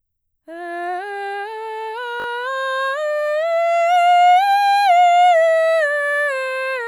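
Music, with a repeated buffer at 2.2 to 2.26 s: fresh audio failed to reach the output in time, so the device replayed its last block three extra times. The result is a brief stutter with hard joins, each repeat about 20 ms long, and practically no audio is lost.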